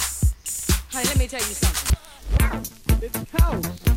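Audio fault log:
2.27–3.69 s, drift correction step: for about 1.4 s the playback rate drops by about 6%, so speed and pitch fall together by roughly 107 cents, a little over a semitone flat, before returning to the original rate. Because tempo and pitch move as one, the passage sounds both slowed and detuned rather than merely out of tune. This is likely a clock-matching resampler adjusting its rate in one abrupt step to rebalance its buffer, far beyond the tiny corrections such software normally makes.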